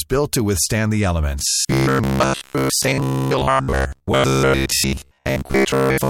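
From 1.39 s to 6.10 s the speech turns into a rigid, metallic buzz pitched at 66.8 Hz, still loosely tracking the words but flattened into a mechanical drone. This is robotic sound from repeated short buffers. Audio is likely arriving too seldom, so the playback side keeps replaying the last fragment, about 15 ms long, which fits that buzz frequency. Most of the time in this stretch is filled by such repeats while the real audio is skipped.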